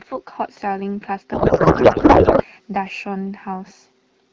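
From 1.33 to 2.44 s the speech turns into garbled noise and warble that barely tracks what's being said, which is a codec payload misread. The decoder is getting frames that look valid, but the bits land in the wrong fields, and the sound points to octet-aligned AMR being read as bandwidth-efficient. Before and after, the audio is clean, as you'd expect from AMR-WB at around 12.65 kbit/s, so both ends evidently agree on the packing again.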